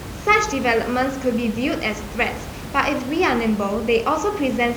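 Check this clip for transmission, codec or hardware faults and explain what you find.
Nothing stood out on listening to this speech clip, where only the room's own background noise sits about 13 dB below the talker.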